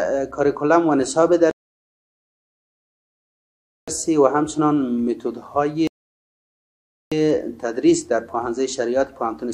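At 1.51 s the sound drops to dead silence and stays there until 3.88 s, then picks up exactly where it left off; a second gap runs from 5.87 to 7.12 s and resumes the same way. These are rebuffering stalls: playback consumed all the audio that had arrived and paused until more downloaded. Nothing is skipped or repeated, but the two gaps add about 2.37 s and 1.24 s to the running time.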